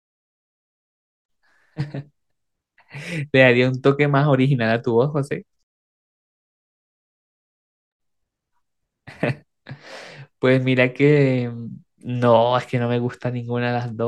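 No technical faults are audible.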